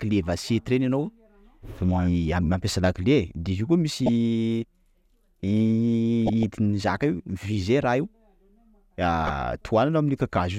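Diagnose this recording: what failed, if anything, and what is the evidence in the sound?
Residual bit errors from weak DAB reception slipped past error correction into the MP2 codec data, corrupting samples so single sub-bands got short blips of noise. The result is DAB burbling: brief noise blips over the speech at 3.98–4.09 s, 6.26–6.43 s and 9.22–9.33 s.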